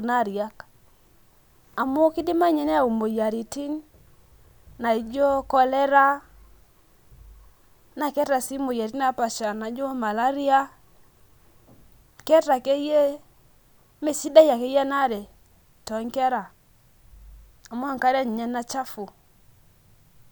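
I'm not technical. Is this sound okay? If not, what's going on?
Yes, nothing in this speech recording points to a technical problem with the signal itself.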